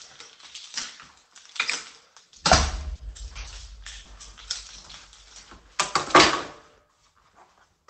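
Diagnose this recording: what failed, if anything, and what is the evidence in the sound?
The network stage failed, with short concealed packet loss. Brief smears or wobbles occur at 0.81, 2.95, 4.03 and 6.23 s. Each lost stretch is 20 ms, except 40 ms at 2.95 s. The decoder extended the preceding sound, then blended back into the real audio.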